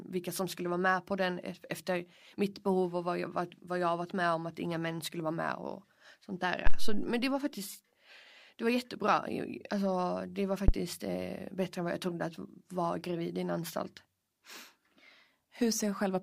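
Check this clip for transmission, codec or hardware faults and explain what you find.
The clip has a hardware fault. A phantom power thump occurs at 6.66–7.12 s, after "vara med och sånt", and again at 10.68–10.74 s, after "det var". A supply switching on a live input sends a step through the coupling capacitors. Each is a deep thump peaking around -11 dBFS, decaying over 103 ms and 12 ms respectively.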